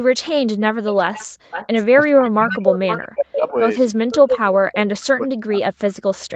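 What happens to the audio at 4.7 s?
At 4.7 to 4.75 s there's a brief echo leak: a scrap of voice returns about half a second late, roughly 15 dB under the speech, likely an echo canceller letting some through. Right after, from 4.78 to 5.88 s, the speech is suppressed in double talk. The voice dips hard, around 40 dB at worst, over about a second, likely the canceller muting both talkers.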